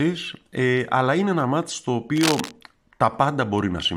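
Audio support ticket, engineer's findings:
Cable scratch noise, 2.16 to 2.52 s, right after "είναι ένα μάτς στο". Dense, uneven scratching burst over the speech, only a few dB below it. Likely a worn cable or connector being moved: unstable contact resistance rapidly modulating the signal path. Reseat or replace the lead.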